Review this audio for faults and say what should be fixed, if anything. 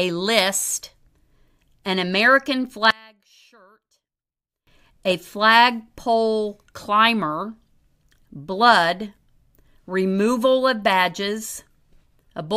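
From 2.91 to 4.67 s, just before "a flagpole climber", the speech falls by about 30 dB to a faint trace, likely from one channel inverted so the centred content cancels when summed to mono. Unlike a true dropout, some faint residue is still audible. Check and match the polarity of both channels before any mono fold-down.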